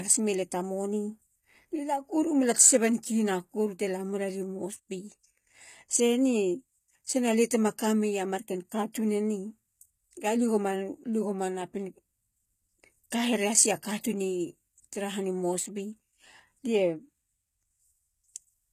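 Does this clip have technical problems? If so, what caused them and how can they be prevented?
Yes. Throughout the speech the treble sounds synthetic, with gritty, lispy s sounds and nothing above 14.9 kHz, likely from HE-AAC compression at a bitrate of around 20 kbps. Replicated treble doesn't line up with the real harmonics, unlike a plain low-pass, which sounds dull. Encode at a higher bitrate with standard AAC so the treble is coded directly.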